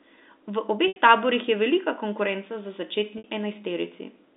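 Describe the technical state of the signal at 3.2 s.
At 3.18 to 3.24 s, just after "je velika konkurenca za", packet loss with pitch repetition: 60 ms of lost audio bridged by a repeated pitch period, giving a brief held, buzzy tone.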